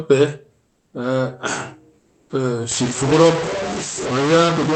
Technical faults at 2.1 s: comfort noise in place of the background

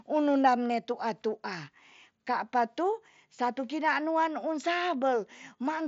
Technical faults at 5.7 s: none

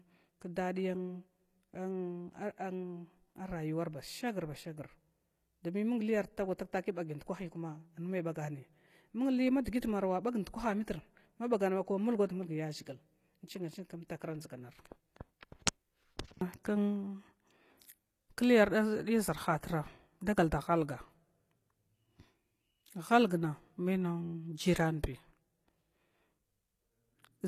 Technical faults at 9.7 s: HE-AAC compression; pre-echo

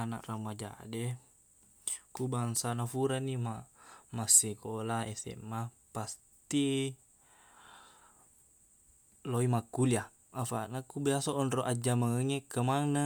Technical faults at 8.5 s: none

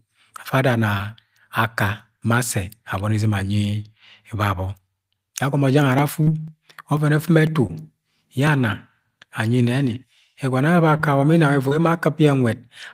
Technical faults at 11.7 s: short concealed packet loss

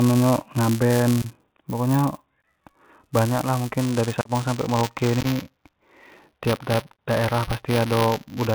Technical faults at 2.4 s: Bluetooth CVSD headset codec; buffer tearing; unconcealed Bluetooth headset packet loss

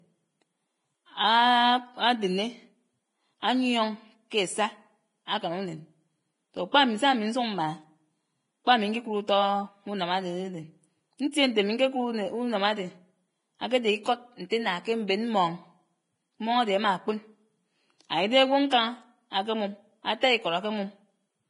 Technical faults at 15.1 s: Vorbis compression; pre-echo

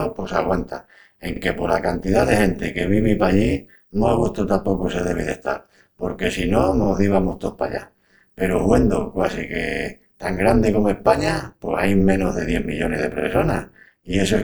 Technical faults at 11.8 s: overlap-add ripple

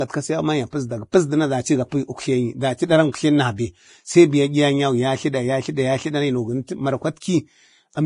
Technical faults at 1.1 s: Vorbis compression; pre-echo

